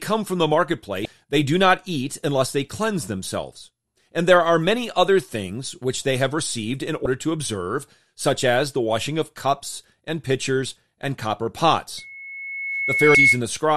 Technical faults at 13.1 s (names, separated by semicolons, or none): loudspeaker feedback squeal; damaged data in a compressed stream